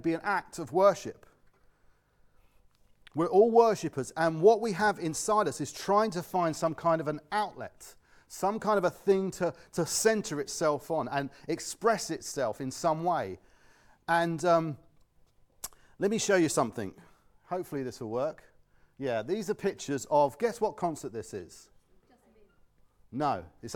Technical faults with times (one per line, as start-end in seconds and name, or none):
none